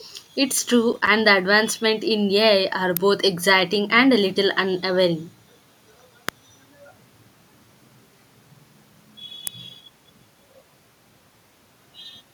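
Speech carries two kinds of fault. From 0.93 to 1.07 s there is processor overload crackle, a short gritty tearing. The system missed a handful of buffer deadlines, each buffer only a few milliseconds long. Each miss left a brief hard-edged hole of silence, and together they form the crackle. Sharp snaps sit on top of the sound at 2.97, 6.29 and 9.47 s. Each is over almost instantly. They are likely electrical switching spikes, caused by a nearby switch, motor or static discharge arcing into the audio line.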